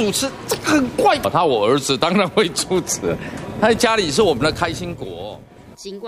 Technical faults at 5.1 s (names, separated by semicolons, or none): zipper noise